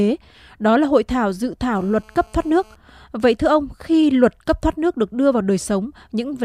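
A hard, raspy GSM phone buzz sits under this speech recording from 1.75 s to 2.76 s, pulsing at about 217 Hz with a dense stack of harmonics that bear no relation to the talker. It comes from a 2G handset close to the audio chain, whose bursty transmissions are rectified by the circuitry into a low-frequency rasp. The buzz stays steady throughout, consistent with a phone on a call, and sits at about 32 dB below the speech.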